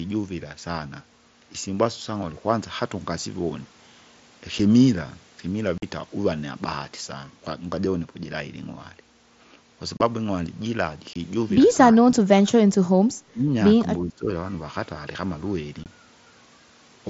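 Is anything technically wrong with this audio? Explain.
Yes, there are two kinds of fault in this speech clip, heard over a wideband Bluetooth headset link whose mSBC coding adds only a light grain.

Unconcealed Bluetooth headset packet loss occurs at 4.59 s, 5.78–5.83 s, 9.97–10.00 s, 11.13–11.16 s and 15.84–15.86 s. Gaps of 7.5, 45, 30 and 22.5 ms fit whole 7.5 ms headset frames going missing with nothing filled in. Each sounds like a hard, abrupt dropout. On a waveform it is a flat-line notch with sharp edges. On a spectrogram it is a full-band vertical blank stripe.

Speech suppressed in double talk appears at 11.92–12.59 s, 13.31–13.57 s and 14.01–14.29 s. The voice sinks by up to about 30 dB in the first stretch and about 15 dB in the others, so it sounds ducked and choppy. The likely cause is an echo canceller that turned everything down while both sides spoke at once. The waveform shows shrunken envelope patches lasting a few hundred milliseconds. 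The spectrogram shows the harmonics fading, with the upper bands thinning.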